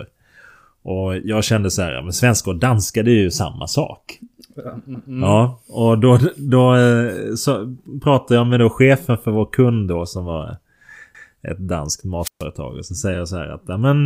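At 11.15 to 11.35 s, just after "kund då som var" and before "ett danskt", there is an overlapping chunks fault. The audio was handled in blocks that begin before the previous block has finished, so about 200 ms of material is played a second time at the join. It is heard as a short stutter where the repeated piece is spliced back in. The position of the join fits processing in chunks of about 6 seconds.

From 12.21 to 12.44 s, right after "ett danskt", there is a wireless microphone squelch dropout. The analogue FM link fades, a brief rise of hiss comes up, and then the receiver's squelch closes and mutes the output for about 131 ms. That leaves a near-silent hole in the speech, after which the signal returns as the carrier recovers and the squelch reopens.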